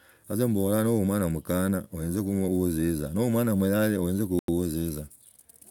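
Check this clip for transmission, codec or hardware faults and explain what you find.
One fault turns up in this speech clip. At 4.39 to 4.48 s the sound drops to silence for about 92 ms, then resumes where it stopped or slightly later, most likely a Bluetooth stall, where interference delayed packets and the headphone buffer ran dry.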